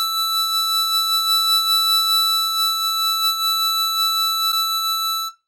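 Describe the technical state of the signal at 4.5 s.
A brief glitch cuts into the music from 4.48 to 4.54 s. It is damaged data in a compressed stream: corrupted bytes leave the decoder misreading those frames and losing sync until it locks onto the next valid frame header.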